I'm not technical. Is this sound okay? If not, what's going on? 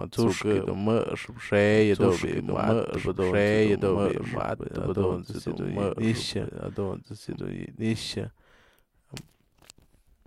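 No. A doubled audio track runs through the whole clip. Every stretch of speech is heard a second time about two seconds later, and the repeat is roughly as loud as the original, so the two overlap and blur together. The copy is a clean duplicate with no fading or roomy echo, so it is not a natural reflection. This most likely happens when the same audio gets recorded twice, once through a slower path that lags behind.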